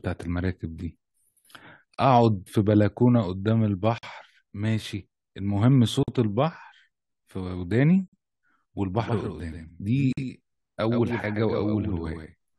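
At 1.94, 3.98, 6.03, 8.08 and 10.13 s the speech drops out for 40 to 48 ms, every 2 s. Those are gaps at joins of encoded pieces: chunks encoded separately and butted together untrimmed, leaving encoder delay and padding as smeared holes.

From 8.99 s to the end there's a doubled audio track: a dry, full-band copy of the speech trailing about 150 ms behind and roughly 5 dB quieter, cutting in abruptly. It's likely a second, slower capture path mixed in alongside the original.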